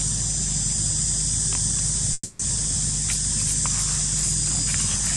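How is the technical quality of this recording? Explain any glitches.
One glitch stands out: a call audio freeze from 2.13 to 2.41 s. For about 260 ms the last sound is stretched into a fading buzz, with roughly 20 ms of silence, and nothing appears lost. This likely comes from delayed packets draining the jitter buffer, so the audio resumes where it stopped, now 260 ms later. On a spectrogram this shows as smeared, flat horizontal bands, and the waveform shows a decaying envelope.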